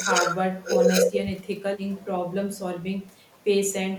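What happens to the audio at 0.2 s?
Nothing goes wrong at 0.2 s; the speech there plays through intact, with no dropout, click or other fault.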